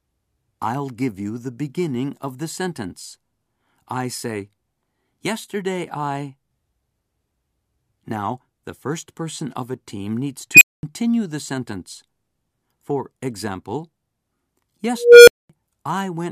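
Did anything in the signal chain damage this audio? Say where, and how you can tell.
Yes. An unstable filter in the processing, a recursive filter with bad coefficients, blows up twice. After "of a team needs" a tone near 3 kHz swells in 68 ms at 10.54 s. At 14.92 s a tone near 500 Hz grows over 354 ms. Each clips, overflows, then drops into 0.22 s of silence, which sets it apart from feedback howl, which keeps ringing.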